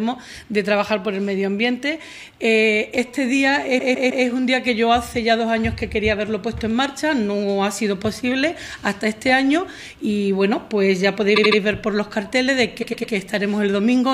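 Three bursts of repeated frames turn up, at 3.78 to 4.25 s, 11.35 to 11.59 s and 12.82 to 13.13 s. Each time a short block of encoded audio, 157, 78 and 105 ms long, plays three extra times, so the sound stutters and the clip stretches.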